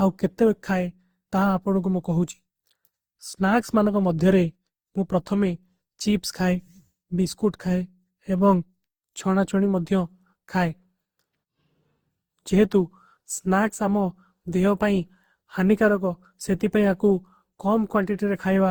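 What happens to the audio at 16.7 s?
At 16.7 s you're hearing the same generation loss that runs through the whole clip: swirly, hollow, smeared speech with soft attacks. That's likely from about seven rounds of Opus encoding at 48 kbit/s, each pass adding fresh quantisation noise.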